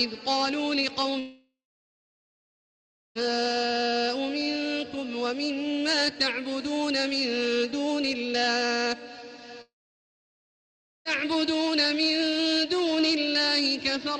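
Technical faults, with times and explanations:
1.19–3.28 s, long network dropout: about 1.96 s of sound is lost, likely from a network dropout. The receiver stretches the last sound into a short fading buzz, then 1.6 s of silence. On a spectrogram, a smeared tail gives way to a blank band, and the waveform goes flat.
9.61–11.08 s, long network dropout: about 1.44 s of sound goes missing, likely from a network dropout. A brief fading hiss gives way to 1.34 s of silence before the sound resumes past the lost part. The waveform shows a flat gap, and the spectrogram goes empty across all frequencies.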